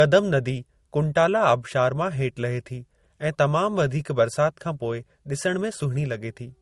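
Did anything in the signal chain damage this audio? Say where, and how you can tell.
Yes, at the codec stage, throughout this speech. The top end stops dead at 18.3 kHz, and two different flavours of smearing sit on top of each other. That's likely transcoding between lossy codecs, something like MP3 re-encoded as Opus, each adding its own artefacts.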